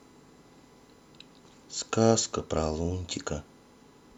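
Throughout the speech runs a USB whine, a steady tone at 1 kHz sitting roughly 40 dB below the signal. The bus's 1 ms frame timing leaks through power or ground, and its fixed 1 kHz pitch, far above 50 or 60 Hz, separates it from mains hum.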